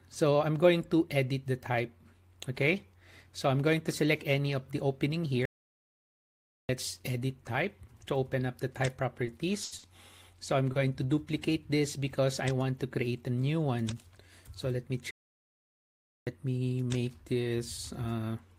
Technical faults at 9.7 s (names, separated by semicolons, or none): burst of packet loss; short stall from a late packet